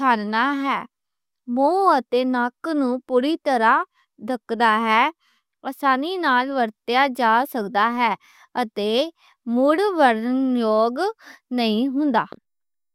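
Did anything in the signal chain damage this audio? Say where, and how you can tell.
No, nothing along the way seems to have hurt this speech recording; there's no point where any stage of the chain audibly went wrong.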